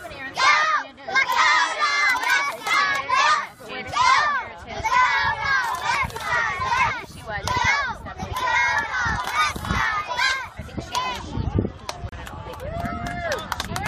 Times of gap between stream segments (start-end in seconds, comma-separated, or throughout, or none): 6.07, 12.09-12.12